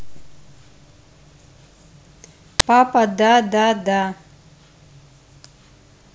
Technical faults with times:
2.60 uninitialised buffer

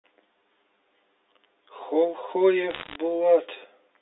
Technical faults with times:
0.00-4.02 channel delay (comb filtering)
2.70-2.96 bit errors on a digital phone line

